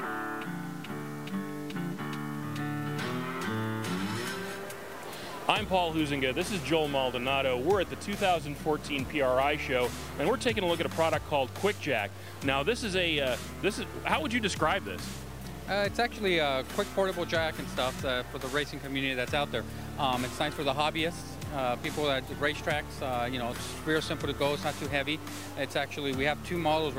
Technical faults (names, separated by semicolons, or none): low bit depth without dither